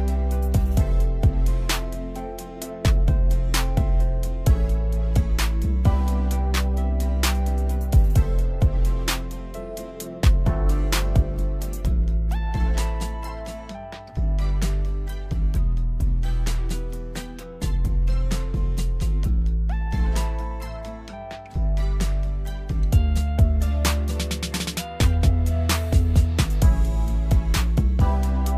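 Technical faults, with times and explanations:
No technical faults can be heard anywhere in the signal.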